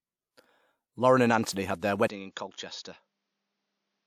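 Between 1.53 and 1.56 s, just before "had their", a transform codec spread quantisation noise across a block where an attack arrived late, so pre-echo fills the 36 ms before the onset with hiss and the attack itself sounds softened.

From 2.07 s to the end, just after "had their", the input was likely switched to a poorer device. After a 20 ms silence, the sound turns duller with nothing above 6.9 kHz, drops by about 10 dB, and carries new background noise around 50 dB below the signal.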